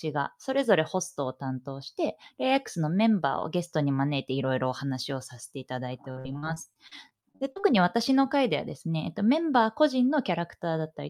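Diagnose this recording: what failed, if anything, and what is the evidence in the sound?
Network stage: repeated packet loss (robotic sound) between 6.11 and 7.65 s. Over that stretch the speech turns choppy, broken by a dense run of short holes, the longest about 54 ms. The receiver patched roughly a quarter of the span, around 0.4 s in total, by stretching the last good sound forward, which produces the buzzy, robotic tone. A single dropout or a clipped converter would not explain this. The giveaway is many brief concealed gaps clustered in one burst.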